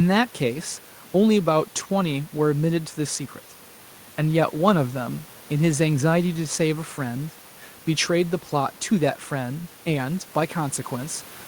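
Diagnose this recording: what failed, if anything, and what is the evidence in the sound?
Nothing in the chain has failed; the only thing under the speech is the room's own background noise, sitting about 26 dB down, which belongs to the recording rather than to any stage of the system.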